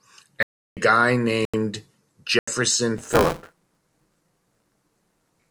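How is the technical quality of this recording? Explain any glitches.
The technical quality is poor, with two kinds of fault in this speech recording.

Block of digital silence at 0.43–0.77 s, 1.45–1.54 s and 2.39–2.48 s: output likely wasn't filled in time, so zeros replaced the audio, leaving abrupt holes of 341 ms and 85 ms.

Buffer tearing from 2.98 s to the end: the writer and the hardware reader crossed inside each 256-sample period, splicing in audio about 20 ms old, heard as a 172 Hz robotic buzz.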